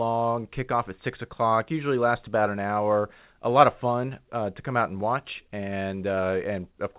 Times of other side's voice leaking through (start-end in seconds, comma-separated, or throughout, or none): none